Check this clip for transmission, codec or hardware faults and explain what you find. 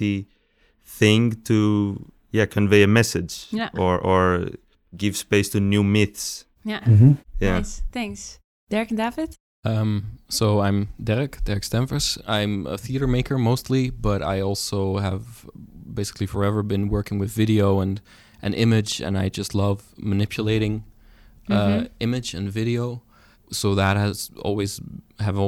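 No transmission, codec or hardware faults are audible anywhere in the speech.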